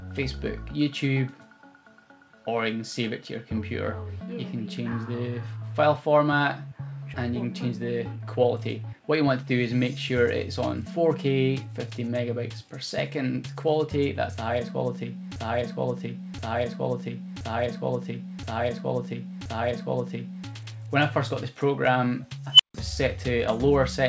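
At 7.14 s there is a skip ahead: roughly 0.7 s of audio was discarded while later audio was already queued, so playback jumps forward with no gap at all. The two sides of the cut are joined directly, and the missing material simply never plays.

From 8.13 to 9.85 s a jitter buffer speed-up follows. The receiver had built up excess delay and trimmed it by repeatedly removing short pitch-period slices, about a fifth of a second in total. The sound runs at 113% speed with unchanged pitch and comes across as hurried.

Between 15.36 and 20.48 s a system hang loop takes over. The host stalled while the audio hardware kept replaying its ring buffer, so one 1.024 s segment repeats exactly five times, which fits a 16384-sample buffer. Because the loop is long, it is heard like a skipping record.

At 22.53 to 22.74 s an unstable filter blows up. A recursive filter received bad coefficients and its output grew unbounded, producing a squeal around 3 kHz that swells to clipping within 66 ms. 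Numeric overflow then silences the output for about 151 ms until the filter resets. Throughout, the band stops at 8 kHz, as expected from the wideband call path.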